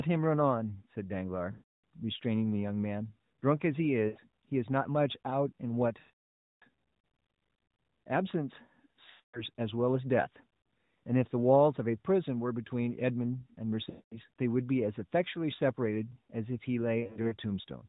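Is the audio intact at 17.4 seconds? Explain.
No. Radio errors corrupted scattered AMR speech frames between 17.0 and 17.36 s, the lost AMR speech frames totalling about 160 ms over 320 ms. The decoder patched each gap with fading repeats of its last good settings, so 17.4 s falls as brief dips and warbles give way to a weak, rough recovery.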